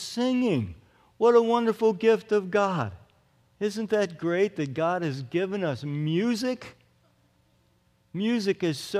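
No technical faults can be heard anywhere in the recording, and the signal holds steady throughout.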